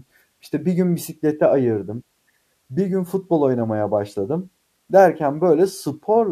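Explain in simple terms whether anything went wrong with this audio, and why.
Nothing went wrong here: the recording of speech comes across with no technical problems that a careful listener would pick up anywhere in it.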